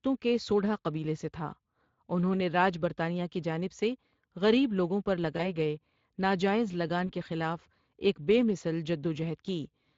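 From start to finish the speech carries Speex codec damage, and it is plainly audible. Speex is a CELP codec that models the voice as a filter driven by a coded excitation signal. The excitation gets too few bits here. The result is a hoarse, noisy edge on the voice. The sound fits a middle Speex setting of around 20 kbps, where any content above 8 kHz is a shaped noise fill rather than real detail.

At 5.37 s comes the first VoIP packet loss concealed by the speech codec. One 20 ms frame is missing. The decoder fills the gap by continuing its last pitch and filter at falling gain. This gives a brief stretched, fading sound that ends near 5.42 s. The same happens at 7.07 s, again one 20 ms frame, lasting to about 7.12 s. Each frame builds on the previous one, so the voice sounds weak or distorted for a short moment after each gap.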